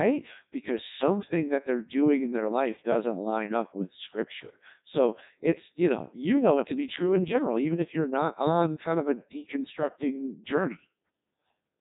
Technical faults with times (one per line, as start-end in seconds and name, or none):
0.00-11.81 Codec 2 vocoder